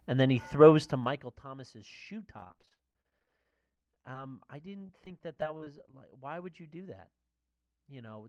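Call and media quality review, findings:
Zipper noise, 0.8 to 1.4 s, right after "and then he": ticking rides on a level drop of around 20 dB. Gain stage is stepping in 1 dB increments about 30 times a second, unsmoothed.

Repeated packet loss (robotic sound), 2.38 to 4.15 s (30 gaps, longest 31 ms, about a quarter of the span concealed) and 4.70 to 6.13 s (15 gaps, longest 25 ms, 13% concealed). Choppy, pieces missing. Jitter buffer/network keeps patching holes by stretching the last sound. The call codec path caps content near 12 kHz.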